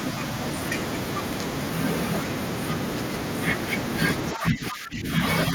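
A speech recording in which, from 4.34 to 5.08 s, the voice sinks by roughly 10 dB. This is speech suppressed in double talk, likely an echo canceller unable to separate the local talker from the loudspeaker echo of the far end and attenuating both.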